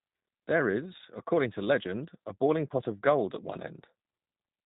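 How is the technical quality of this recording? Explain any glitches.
The quality is limited by one fault that runs throughout. The speech sounds rough, thin and audibly synthetic from start to finish, with nothing above 3.8 kHz. This is G.729 codec damage, consistent with an 8 kbit/s stream: each short frame is rebuilt from a filter model, a pitch guess and a few pulses, so fine detail is lost.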